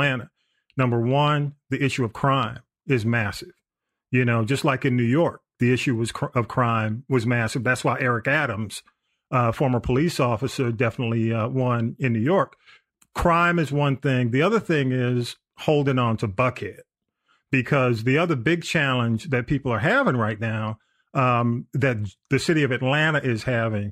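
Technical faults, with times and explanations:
Nothing in this speech recording stood out as a technical problem on listening.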